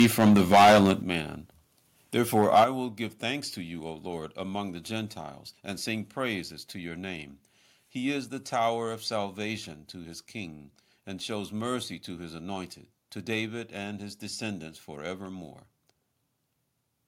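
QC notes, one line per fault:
0.00–0.93 s, microphone overload: peaks land about 13 dB past the converter's limit, so a big share of the waveform gets its tops sheared flat. That's the harsh, crackly edge you hear. The input gain was likely set too hot.
1.02 s, microphone volume stepped down: everything, voice and background, drops about 9 dB in one step. This is likely the call software pulling the input gain after that clipping.
2.35–2.64 s, microphone overload: milder this time, about 4 dB over, with a small fraction of samples clipped, just before "will give thanks to". There's still a gritty edge on those peaks, likely from the gain still running too high.
2.64 s, microphone volume stepped down: another sudden drop of about 8 dB right ahead of "will give thanks to". It's likely the software stepping the input down again after the distorted peak.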